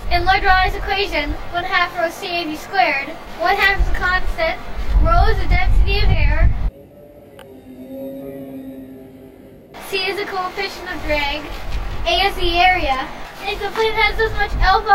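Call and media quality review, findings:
Channel delay (comb filtering) throughout clip: rough, slightly doubled sound. One channel lagging roughly 20 ms before mono sum, likely playout or capture path. Spectrogram shows fixed, evenly spaced horizontal notch bands from around 30 Hz upward, unchanged over time.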